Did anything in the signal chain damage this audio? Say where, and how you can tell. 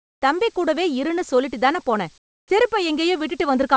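Yes. From 0 to 0.22 s and 2.18 to 2.50 s the background turns flat and featureless, about 26 dB and 16 dB down: comfort noise in place of the background, likely from discontinuous transmission in call processing.

At 2.47 s the speech starts abruptly, its first 30 ms missing under that same hiss. That's likely the onset clipped by the voice detector, slow to reopen.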